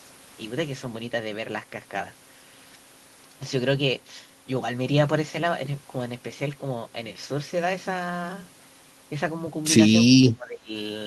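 From 10.11 to 10.72 s the speech sinks by about 25 dB; the likely cause is speech suppressed in double talk, with the echo canceller ducking its own talker along with the loudspeaker echo.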